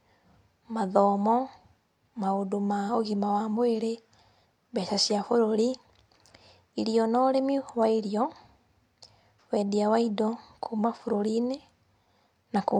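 No technical fault can be heard anywhere in the recording of speech; the signal stays steady and intact throughout, with nothing dropping out, breaking up or changing character along the way.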